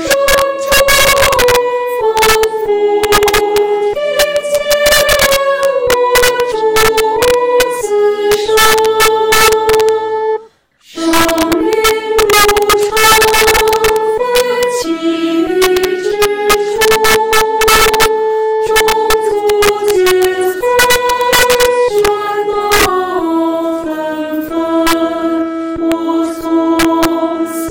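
Integer overflow runs through the whole recording: on every loud peak the audio snaps into a harsh, violent crack far sharper than ordinary clipping. The signal appears to have been pushed about 7 dB past full scale, and instead of being held at the ceiling, each sample that exceeded the integer limit wrapped around to the opposite extreme. That affects only a small share of samples, around three percent, but each one jumps across the full range and produces these cracks.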